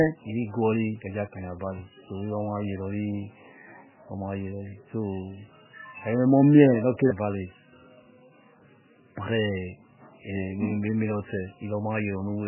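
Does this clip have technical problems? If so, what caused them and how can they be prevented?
Yes. Throughout the speech there is MP3 compression damage, heavy enough to point to a very low bitrate, around 8 kbps. The sound is watery and swirly, consonants smear, and sibilants lose their edge because nothing is left above 3 kHz. On a spectrogram this shows as a flat ceiling at 3 kHz with patchy, flickering blocks below it as weak frequency lines drop in and out between frames. The likely cause is aggressive MP3 encoding, which can be prevented by recording and delivering at a much higher bitrate or in a lossless format.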